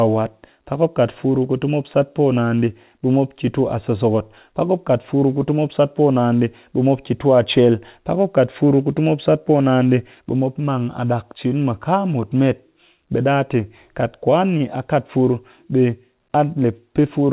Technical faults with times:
none

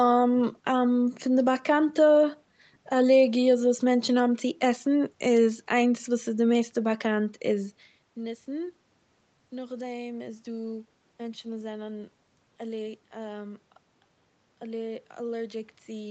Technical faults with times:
none

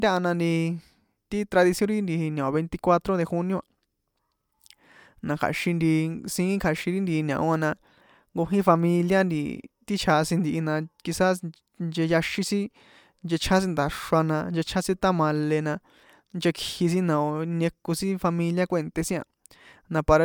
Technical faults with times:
none

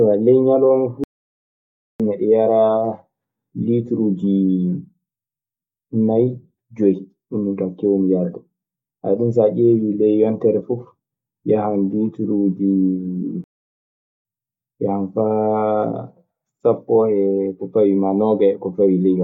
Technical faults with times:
1.04-2.00 playback stall
13.44-14.25 playback stall

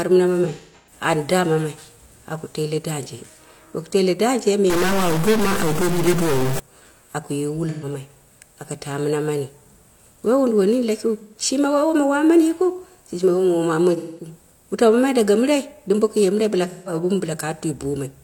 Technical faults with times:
0.44-0.93 AAC frame loss with concealment
4.70-6.59 stuck bit
7.69-7.85 AAC frame loss with concealment
11.18-11.35 AAC frame loss with concealment
13.96-14.28 AAC frame loss with concealment
16.65-16.93 AAC frame loss with concealment

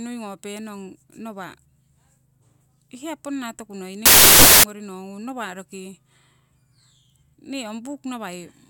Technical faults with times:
4.06-4.63 samples built from the wrong bytes

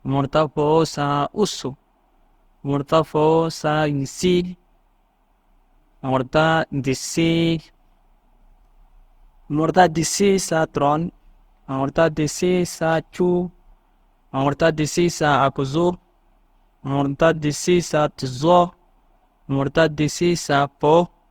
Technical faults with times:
0.00-21.30 generation loss

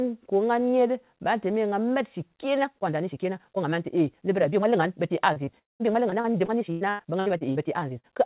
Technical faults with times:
2.60-8.25 time-stretched section
5.33-5.50 short concealed packet loss
5.59-5.83 long network dropout
6.10-7.58 repeated packet loss (robotic sound)
8.00-8.06 short concealed packet loss

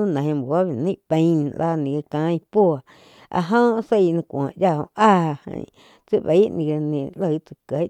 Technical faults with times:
none

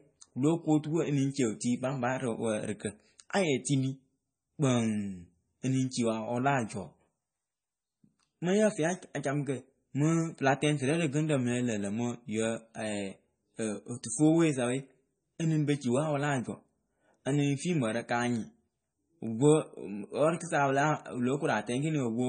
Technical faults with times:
0.00-22.29 MP3 compression

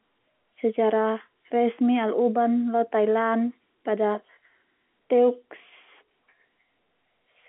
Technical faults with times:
none

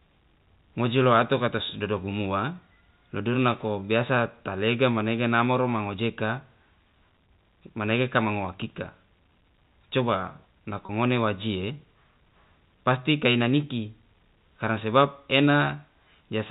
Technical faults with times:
10.86-10.89 packet loss with pitch repetition

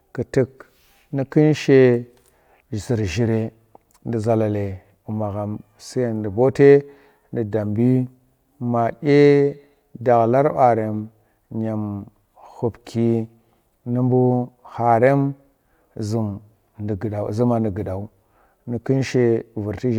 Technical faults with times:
none

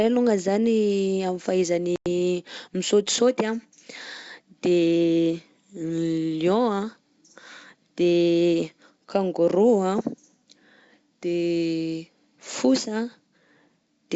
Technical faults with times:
1.96-2.07 packet loss on an ADPCM call

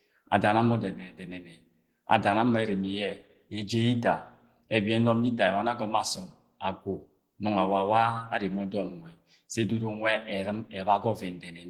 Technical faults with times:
0.00-11.70 Opus compression

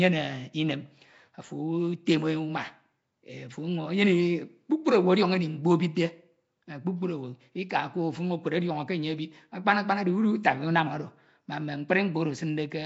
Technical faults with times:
0.00-12.85 Nellymoser compression

